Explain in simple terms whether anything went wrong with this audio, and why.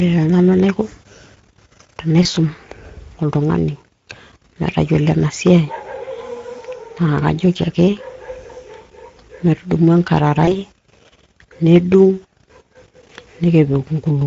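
Speex codec damage runs through the whole clip. This older speech codec squeezes the voice into very little data, leaving too few details to rebuild it faithfully. That makes the speech sound noticeably rough and hoarse throughout.

VoIP packet loss concealed by the speech codec occurs at 2.23, 8.47 and 10.45 seconds. Each time, one 20-millisecond chunk of speech went missing. The decoder covered the gap by stretching the last sound and letting it fade. Because it rebuilds each moment from the previous one, the distortion lingers briefly after the gap, longest at 10.45 seconds.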